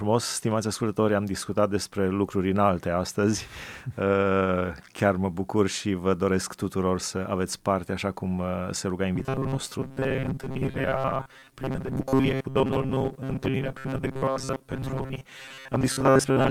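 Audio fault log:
9.16–16.50 s, robotic sound from repeated short buffers: after "cum uh se ruga", fresh audio likely stops arriving in time, so the playback side keeps refilling the gap by looping its last fragment of roughly 7.5 ms while most of the real signal, around 70 percent, is skipped. Those fixed-length loops stamp a steady 133 Hz buzz onto the speech, leaving a rigid, metallic drone that only loosely tracks the syllables through to the end.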